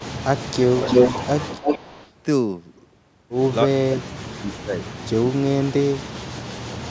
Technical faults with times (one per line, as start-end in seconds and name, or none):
0.00-0.13 echo leak
0.56-0.87 speech suppressed in double talk
0.72-2.11 echo leak
3.85-4.82 speech suppressed in double talk
5.21-6.04 speech suppressed in double talk